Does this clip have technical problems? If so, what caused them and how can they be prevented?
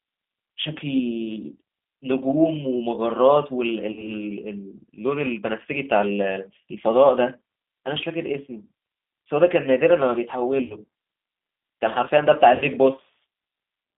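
Yes. Throughout, the speech runs through the G.729 codec at 8 kbit/s. The line passes only about 200 Hz to 3.6 kHz, and the codec damage is plainly audible as a rough, slightly synthetic edge. That edge comes from each 10 ms frame being rebuilt from a vocal-tract filter, a pitch predictor and a handful of pulses. Band-limiting alone would sound dull, not rough. Keeping the call on a wideband codec such as G.722 or Opus prevents it.

VoIP packet loss concealed by the speech codec occurs three times: 3.92–4.21 s (about 40 ms missing, which fits two lost packets) and 10.64–10.77 s and 12.55–12.65 s (about 60 ms each, fitting three packets). The decoder stretches its last pitch and filter into a fading buzzy tone or coloured noise, and the speech stays weak briefly after audio returns. That smeared tail separates it from a clean dropout or click. Jitter buffering, forward error correction or a less congested network path prevents it.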